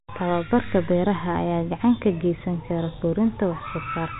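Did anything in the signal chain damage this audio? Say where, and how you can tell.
No, nothing in this speech stood out as damaged on listening, beyond the narrow telephone-band sound that its G.711 coding gives it.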